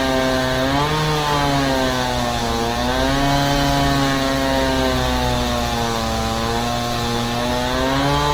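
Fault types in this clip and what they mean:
Opus compression: Throughout, the sound is grainy and rough, with tonal parts turned noisy and few swirling holes, the damage of a likely Opus encoder in its music mode, which fits about 16 kbps. Bandwidth stays full, extending to about 20.1 kHz.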